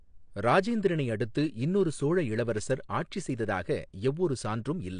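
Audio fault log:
Throughout: AAC compression. The speech is dull and smeared with a warbling, fizzy edge on sibilants, and nothing sounds above 9.8 kHz. This is likely low-bitrate AAC-LC, about 32 kbps, starving the upper bands and lowering the cut-off.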